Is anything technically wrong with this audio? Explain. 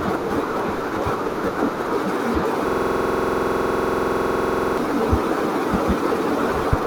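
Yes. From 2.69 to 4.78 s the speech becomes a rattling, buzzy stutter: one 46.4 ms slice repeats 45 times at 21.5 Hz. This is a system hang loop. The system froze while the hardware kept replaying its ring buffer, which fits a 2048-sample buffer.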